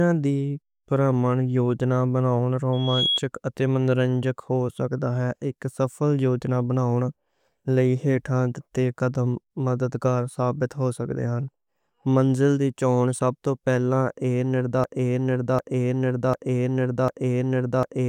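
A speech recording carrying two separate faults. From 2.73 to 3.20 s a thin, piercing tone near 3.3 kHz swells up over roughly a third of a second until it sits about as loud as the speech, then stops just before "اتے منورنجک ہو سکدا". That is loudspeaker feedback squeal: a microphone was hearing the loudspeaker it fed, and at that one frequency the loop gain climbed above unity, so the tone fed on itself and grew. From 14.84 s to the end, a 0.75 s fragment plays over and over, four times back to back, with no new material, giving the stuck, stuttering sound of a broken-record loop. The likely cause is a stall in the player, encoder or stream, which kept resending the last chunk it held. Whatever should have been heard in those final seconds is gone.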